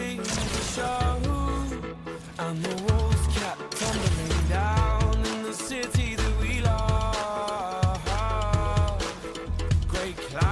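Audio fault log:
No faults found in this clip.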